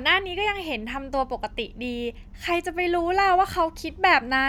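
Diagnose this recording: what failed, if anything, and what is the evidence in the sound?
No audible fault detected.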